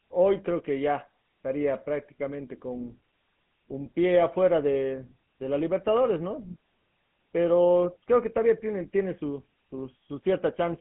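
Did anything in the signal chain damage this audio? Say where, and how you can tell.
Yes, at the codec stage: the GSM full-rate codec runs the whole way through, with gravelly buzz from its pulse-driven excitation, nothing above 3.9 kHz, and a 150 Hz to 3.5 kHz phone band.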